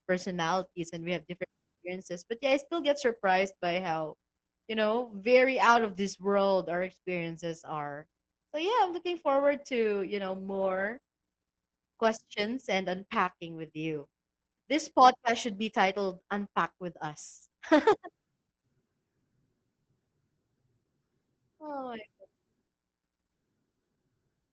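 From start to finish the speech carries heavy Opus voice compression. The SILK coder is squeezing the audio into a band that tops out around 8 kHz and coding the excitation coarsely, which fits a rate near 10 kbps. Voices come out muffled, hoarse and faintly robotic.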